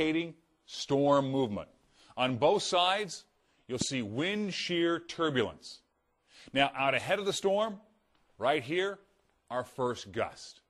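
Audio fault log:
3.81–3.84 s, loud pop: a single sharp pop sits on top of the sound, which carries on underneath, peaking around 10 dB above it. A sudden voltage step or pulse, likely from a plug, switch, static discharge or driver glitch, was added to the signal and shaped by later circuitry.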